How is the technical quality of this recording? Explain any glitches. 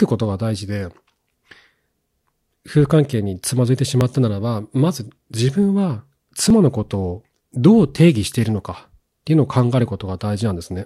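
The speech has three brief skips, at 1.52, 4.01 and 6.50 s, spaced about 2.5 s apart. These are audio missing between chunks. The likely cause is a recorder handling the sound in 2.5 s blocks, losing roughly 7 ms at each handover and joining the two sides with no gap. Each is heard as a tiny jump in the speech. On a waveform, each shows as an abrupt discontinuity. On a spectrogram, each appears as a thin vertical line.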